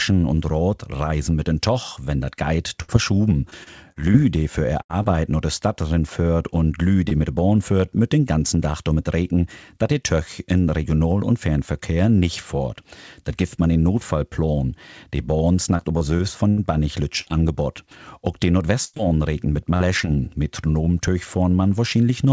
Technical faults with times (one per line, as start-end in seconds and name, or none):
2.82-5.07 repeated packet loss (robotic sound)
7.09-7.13 short concealed packet loss
15.77-17.28 repeated packet loss (robotic sound)
18.84-20.04 repeated packet loss (robotic sound)